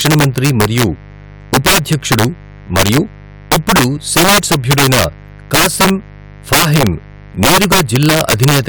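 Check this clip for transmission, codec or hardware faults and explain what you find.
Two faults run through the whole of the speech: a mains buzz and integer overflow.

Mains buzz is present from start to finish. Interference from a dimmer, rectifier or poorly shielded cable has entered the signal path, injecting sharp spikes locked to the 50 Hz supply, twice per cycle. Those spikes carry a dense ladder of 50 Hz harmonics reaching well into the kilohertz range, sitting roughly 25 dB under the speech. The result is a constant raspy, edgy buzz beneath the voice, audible even in pauses.

Integer overflow also affects the entire clip. The signal is driven about 10 dB beyond the range the integer format can hold, and instead of being limited, any sample past the maximum wraps around to the opposite extreme. Only the loudest moments cross that line, around 3 percent of samples, but each one jumps the full scale in an instant. 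On louder syllables this produces harsh, violent cracks, far more abrupt and jarring than ordinary clipping distortion.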